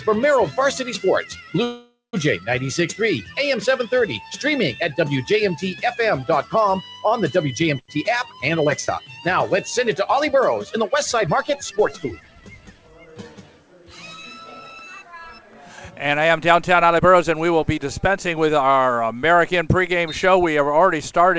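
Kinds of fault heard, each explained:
Call audio freeze: likely delayed packets emptied the buffer, so at 1.64 s the sound smears into a fading buzz, then silence, adding about half a second.
Jitter buffer speed-up: the overfull buffer dropped pitch-period slices, so 7.87–12.06 s runs 6% fast and 16.18–18.69 s 9% fast, hurried but same pitch.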